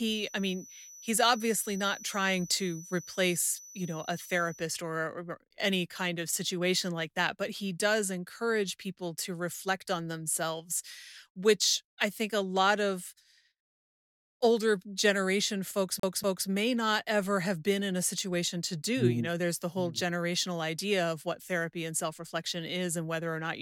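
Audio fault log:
0.00–4.72 s, feedback whistle: a thin, steady tone near 5.9 kHz sits roughly 20 dB under the speech and swells and fades slowly in level. The likely cause is a loudspeaker-to-microphone loop held at the edge of feedback, so one frequency rings on without building up.
16.00–16.48 s, CD stuck on one turn: a fast, even stutter as the same 240 ms of speech plays twice, with a brief mute at each jump. A scratch throws the laser back a track at the same point on each revolution, so that slice repeats.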